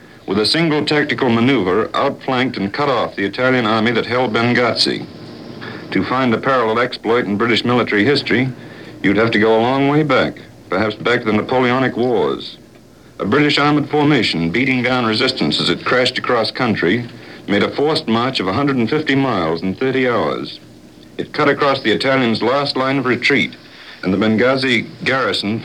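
Nothing technical stands out anywhere in this audio; it's all in good shape.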